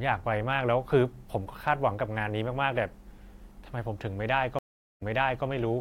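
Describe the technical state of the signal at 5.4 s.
A stream reconnect runs from 4.59 s to 5.45 s, so 5.4 s falls near its end. The connection dropped and the player restarted with a fresh decoder mid-stream. The speech cuts to silence for 395 ms, then resumes 470 ms earlier than where it stopped, as a server resending a short burst would cause. That brief passage is heard again, and with the decoder starting cold, its first frame fades in.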